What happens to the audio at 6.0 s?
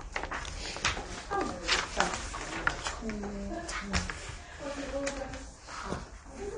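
At 6.0 s you're hearing the same thing that runs through the whole clip: AAC compression damage. Nothing gets through above about 9.7 kHz, so the top end sounds dull and smeared, with a warbly, fizzy edge on anything sustained or hissy. That's likely AAC-LC squeezed hard, in keeping with something near 32 kbps. At that rate the encoder drops the high bands and quantises the rest coarsely against its hearing model.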